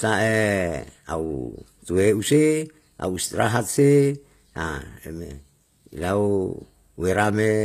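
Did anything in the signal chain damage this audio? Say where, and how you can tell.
Yes, at the codec stage, likely HE-AAC compression, and it runs the whole clip. The s sounds come out gritty and metallic, with nothing above 15 kHz. The treble is rebuilt from copied lower bands, which fits a low bitrate around 24 kbps.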